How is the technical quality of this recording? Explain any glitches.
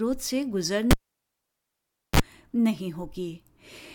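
There's one real glitch here, a cable pulled and plugged in. At 0.91 s a pop cuts the sound to near silence for about 1.24 s. A 35 ms burst of 50 Hz mains buzz comes as the tip makes contact, then another pop brings the sound back by 2.2 s.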